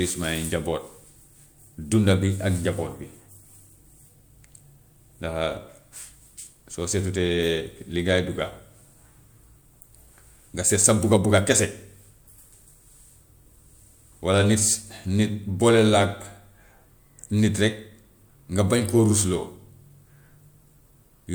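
No technical faults are audible.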